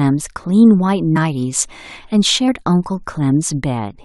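At 1.15 to 1.17 s, and again at 2.47 s, the speech jumps forward because compressed frames were skipped: the decoder didn't play whole frames, either because they were missing from the file or because it rejected them as damaged. Each jump loses around 50 ms of audio, which fits a couple of 23.2 ms frames. Since adjacent frames overlap, you don't get a sharp click at the join, just a quick smeared blip.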